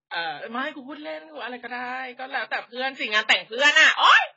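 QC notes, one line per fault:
Throughout, AAC compression: the speech is dull and band-limited, with nothing above 7.6 kHz, and sibilants and sustained sounds carry a warbling, fizzy smear. The heavy damage likely comes from AAC-LC at around 16 kbps, which drops the top band and starves the rest.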